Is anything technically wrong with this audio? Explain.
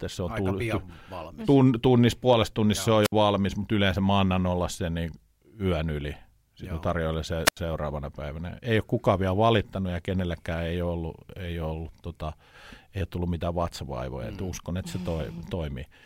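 Yes. This speech has two wireless microphone squelch dropouts: at 3.03 to 3.12 s, after "se on" and before "valmis mutta yleensä mä", with a mute of about 59 ms, and at 7.45 to 7.57 s, after "tarjoilen se", muting for about 83 ms. Each time, the FM radio link fades, a short surge of hiss or static rises, and the receiver's squelch cuts the output to near silence before the speech returns. That preceding burst of static marks it as an analogue radio fade, unlike a digital dropout, which falls silent abruptly.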